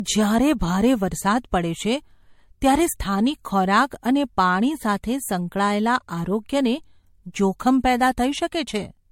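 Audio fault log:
Throughout: generation loss, likely from repeated MP3 encoding at around 64 kbit/s, roughly four passes. Each re-encode quantises on a shifted frame grid, so noise and spectral holes accumulate, leaving the speech swirly, hollow and smeared, with softened attacks and nothing above 16.6 kHz.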